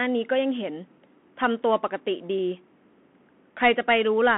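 Throughout, a Bluetooth CVSD headset codec's one-bit delta coding, consistent with 64 kbps, removes everything above 3.8 kHz and leaves plainly audible granular, scratchy distortion.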